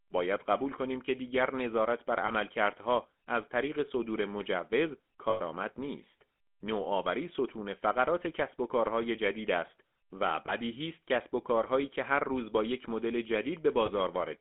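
GSM full-rate codec, throughout the 14-second speech clip: the voice has been squeezed through the original GSM coder, which models the vocal tract and drives it with a sparse, regularly spaced pulse train instead of the real excitation. That coarse source gives the plainly audible buzzy, gravelly grain, which fits a 13 kbps full-rate channel. The line band also confines the sound to roughly 200 Hz to 3.5 kHz, so it sounds thin and boxy.

Lost GSM frames at 2.26 s, from 5.30 to 5.41 s, at 10.46 s and at 13.86 s: when a frame failed, the decoder reused the parameters of the last good frame rather than leaving a gap. Each of the three short losses, about 20 ms, is a brief metallic smear. The 5.30 s loss lasts about 100 ms, roughly five frames' worth, and holds long enough to ring audibly before normal decoding resumes.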